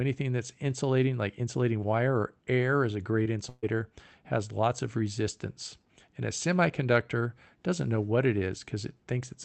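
At 3.23 to 3.27 s, just after "or air is a", a short concealed packet loss occurs. About 20 ms of audio never arrived, and the receiver filled it by extending the preceding sound before blending back in, leaving a brief smear or wobble in the speech.

From 3.49 to 3.65 s, immediately before "has lots of resistance", a burst of packet loss removes about 140 ms. Concealment continues the last sound and fades it across the gap, so a held buzz or decaying hiss replaces the missing stretch with no true silence. Speech then resumes further along. Throughout, the audio is band-limited to roughly 8 kHz, consistent with a wideband call codec.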